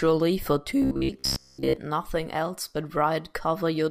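From 0.82 to 1.76 s the speech takes on a robotic sound from repeated short buffers, ending just before "nothing else but". The voice becomes a rigid metallic buzz pitched at 66.7 Hz that only loosely tracks the words. The likely cause is audio arriving too late, so playback loops a segment of about 15 ms in place of most of the real signal, imposing that fixed pitch for roughly 70% of the stretch.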